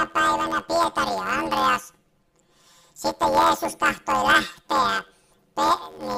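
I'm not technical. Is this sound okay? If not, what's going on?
No. From start to finish there's a fault called planar audio read as interleaved. Each short block, about 11.6 ms long, which fits a 512-sample block, stores all the left-channel sound and then all the right, but it's played back as if the two were mixed pair by pair. Each tiny block is squeezed and played twice, so the timing stays right but everything gains a robotic buzz repeating about 86 times a second.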